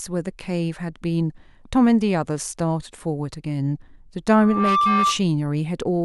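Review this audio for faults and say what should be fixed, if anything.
A loudspeaker feedback squeal rises from 4.35 s to 5.22 s: a single 1.2 kHz tone swells over roughly a third of a second to sit about 5 dB above the speech. The microphone is hearing the loudspeaker it feeds, and at 1.2 kHz the loop gain tops unity, so that frequency feeds on itself. A spectrogram shows one bright horizontal line at 1.2 kHz, and the waveform envelope balloons into a dense, steady block. Lowering loudspeaker gain, moving the microphone out of the speaker's coverage, or notching 1.2 kHz would prevent it.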